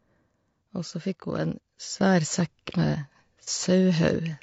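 Throughout the clip, the speech sounds rough and grainy. Noise fills the gaps between the pitch harmonics. The top band sounds thin and somewhat synthetic. This is likely low-delay AAC compression, of the AAC-ELD kind used in video calls. Its short frames cannot separate voice harmonics finely, so each frame costs more bits. The damage is plainly audible, which fits a low bitrate near 32 kbps.

At 2.01 s there is a sudden gain jump. The level rises by about 6 dB in one step. The speech and the background noise get louder together. There is no ramp, so the change is abrupt rather than gradual. The raised level holds to the end of the clip. A likely cause is a gain setting or bit shift applied instantly, from one sample to the next.

From 3.44 s to 3.48 s there is AAC frame loss with concealment. About 30 ms of audio is missing, which fits one lost frame. The decoder rebuilds the gap from the last good spectrum. 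The result is a brief smeared, noisy patch. The loss is too short to fade toward silence, so the speech resumes almost at once after the blur.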